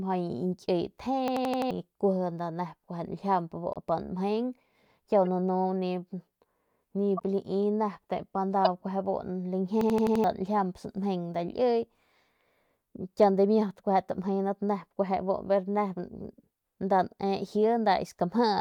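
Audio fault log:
1.28–1.71 s: system hang loop. One 85 ms slice of speech repeats exactly five times at 11.7 per second, a mechanical stutter rather than noise, because the hardware kept replaying a buffer that fits 4096 samples while the system froze. Nearly 0.4 s of audio is lost.
3.73–3.77 s, 5.25–5.27 s, 7.17–7.23 s, 8.65–8.67 s: corrupt frame decoded. Brief chirps and noisy blips, each lasting from one frame to a handful, where damaged bits put energy at wrong frequencies. Unlike the hang loop, nothing repeats, and the new sound doesn't belong in the speech.
9.81–10.24 s: system hang loop. The same fault recurs with the same 85 ms loop, five exact repeats at 11.7 per second. Identical segments stutter in place while the frozen system lets a 4096-sample buffer cycle, costing around 0.4 s of speech.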